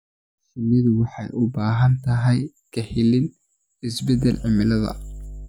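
At 4.10 s a mains hum comes in and stays until the clip ends at 5.49 s. It's a steady low drone sitting under the speech at 50 Hz, and it's fairly prominent, roughly 15 dB below the speech level, so you'll notice it. What's happened is that the power line has leaked into the signal, most often through a ground loop or a transformer sitting close to the cabling.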